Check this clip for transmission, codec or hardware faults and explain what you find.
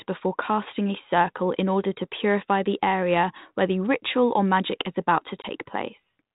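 There's one real fault: packet loss on an ADPCM call, on a G.726 link running at 32 kbit/s. At 5.42 to 5.46 s, about 20 ms of the speech drops out into a hard-edged silent hole, which fits a single lost packet. Because ADPCM only sends differences from a running prediction, the gap knocks the receiver's predictor and step size out of step with the sender's, and they have to rebuild once the audio resumes.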